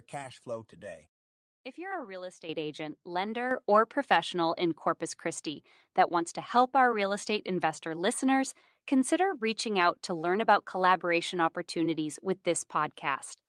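The call software raised the microphone's input volume in one step at 2.49 s, just after "you're a real", and again at 3.51 s. Each microphone volume step-up lifts voice and background together, by about 9 dB and then about 7 dB.

From 6.51 to 6.65 s, after "that wants to" and before "our real estate investor", lost packets were rebuilt from error correction. Low-bitrate copies fill 80 ms, which fits four 20 ms packets, so there is no gap but the sound turns rough and noisy. At 10.23–10.29 s, between "out to" and "about collaboration opportunities with", the same happens for 40 ms.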